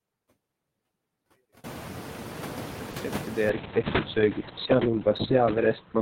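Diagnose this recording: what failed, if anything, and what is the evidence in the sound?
Call processing: noise suppressor artifacts run through the whole clip. The room noise swells from about 1.5 s and sits about 14 dB under the speech. The suppressor pulls it down by about 10 dB in each frame, so it dips between phrases and returns beneath them.

Network: short concealed packet loss occurs twice, at 2.91 to 2.95 s and 2.97 to 3.01 s. Each sounds like a brief smear or wobble. Each fits one missing 20 ms frame that the receiver filled by extending the previous sound, then blended back.

Codec, driven by the network: a call bitrate drop starts at 3.51 s and lasts to the end. The encoder falls from 32 to 6 kbps, and the audio bandwidth shrinks from 20 kHz to 4 kHz. The speech turns muffled and rough, bottoming out for about 1.6 s.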